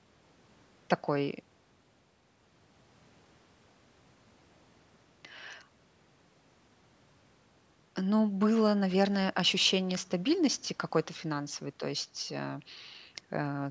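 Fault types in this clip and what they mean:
No faults found: the speech has passed through call microphone processing, whose high-pass filter removing the lowest bass is expected behaviour.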